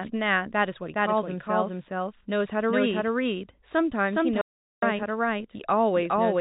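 A speech recording carries a doubled audio track from start to finish: a second full-band copy, about as loud as the original, trails it by roughly 0.4 s with no decay or room colouring, most likely from the signal being captured again through a slower path. On a waveform every syllable envelope appears twice at that fixed spacing, and a spectrogram shows each pattern repeated alongside itself, all within the telephone band that ends at 4 kHz. An audio dropout to silence runs from 4.41 s to 4.82 s, removing about 0.41 s of sound. The waveform falls to a flat line with abrupt edges, and the spectrogram shows a blank column with no room tone, the likely cause being a momentary loss of the input while silence kept being written.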